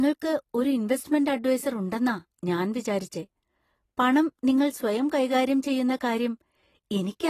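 From start to finish the speech carries plainly audible codec damage, likely from AAC compression. Nothing remains above 14.1 kHz, and coarse quantisation of the spectrum leaves the sound dull and smeared, with a warbling, fizzy texture on sibilants, consistent with AAC-LC at around 32 kbps.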